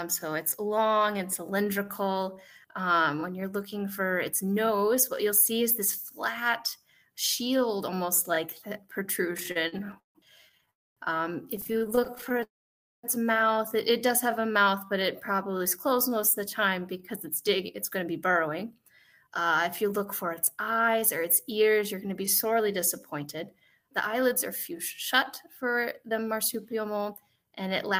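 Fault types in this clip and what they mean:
repeated stalls (stutter): from 9.37 to 10.69 s and 11.57 to 12.43 s, the jitter buffer kept running dry, so brief gaps, up to 156 ms, were filled by continuing the last sound, making it stutter.
call audio freeze: at 10.71 s and again 12.43 to 13.05 s the sound halts, fading into silence for about a quarter and half second, likely from packets held up in transit.
jitter buffer slow-down: 14.34 to 16.40 s, the receiver repeats single pitch periods to rebuild its reserve, adding about 157 ms so the audio runs at 93% speed, same pitch.
jitter buffer speed-up: from 17.95 s to the end, short pitch-period pieces are removed to cut excess delay, trimming roughly half a second so the audio runs about 6% fast.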